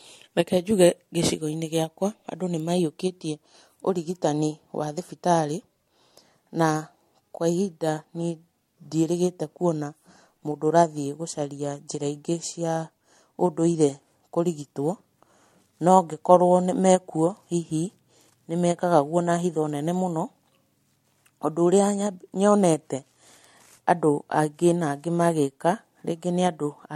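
Speech with generation loss throughout: swirly, hollow tone and blurred onsets, likely from a few MP3 re-encodes at what sounds like 64 kbit/s. The spectrogram shows a hard ceiling at 16.5 kHz and speckled holes.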